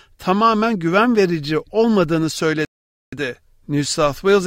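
The player ran dry of downloaded audio at 2.65 s and halted until more data arrived. That rebuffering stall drops the sound into silence until 3.13 s, then picks up exactly where it stopped, losing nothing but adding 0.48 s of dead air.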